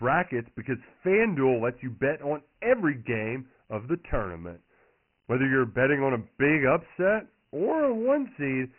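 Dialogic VOX ADPCM runs throughout the speech. Each sample is squeezed into a coarse 4-bit step, at a rate that fits 24 kbps at 6,000 samples a second. The band stops near 2.9 kHz, leaving it muffled, and a heavy gritty hiss trails every syllable.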